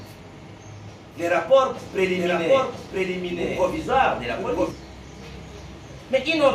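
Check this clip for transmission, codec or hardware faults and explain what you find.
One fault appears. From 1.77 to 4.71 s there is a doubled audio track, likely from the audio being captured again over a slower path. A full-band copy trails about a second behind, roughly 5 dB quieter, with no decay, and it starts and stops abruptly.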